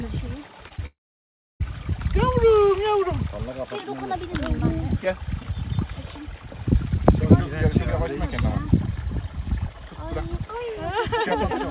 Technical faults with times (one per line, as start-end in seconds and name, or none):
0.68-0.80 short concealed packet loss
0.86-1.62 long network dropout